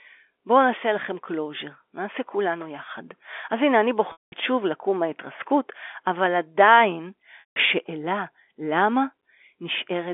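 Speech over a band-limited G.711 telephone line, with packet loss with pitch repetition at 4.12 to 4.32 s and 7.40 to 7.56 s: the last pitch period is repeated, fades into silence over about 50 ms within each 200 ms and 160 ms gap, then speech cross-fades back.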